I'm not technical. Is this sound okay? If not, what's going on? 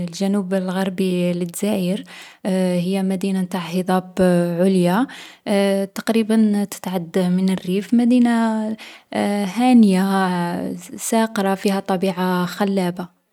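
Yes, this recording sounds fine. There's nothing wrong with it that needs fixing.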